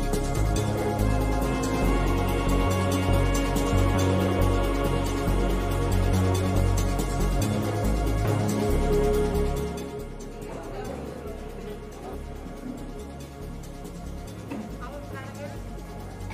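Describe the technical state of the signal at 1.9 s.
At 1.9 s the signal is intact, with no audible technical fault at that moment.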